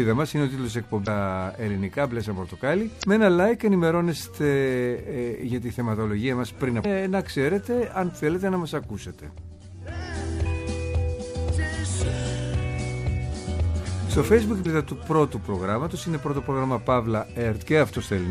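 The audio has four short bursts of damaged data in a compressed stream, at 1.03 to 1.08 s, 2.99 to 3.04 s, 6.81 to 6.85 s and 14.62 to 14.66 s, each lasting roughly 40 ms. Each one is a brief glitch where the decoder hits bytes it can't make sense of, loses its place in the frame sequence and has to hunt for the next valid header before normal playback picks up again.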